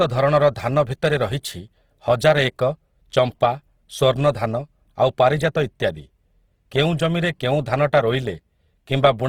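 Throughout, the speech has likely passed through low-bitrate Opus compression, its starved bands filled with folded or noise content, making it plainly grainy and rough.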